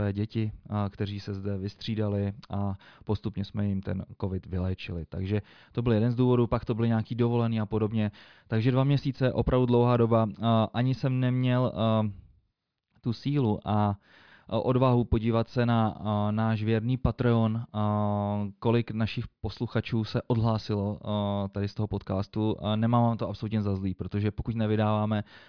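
No technical faults can be heard at any point in the recording.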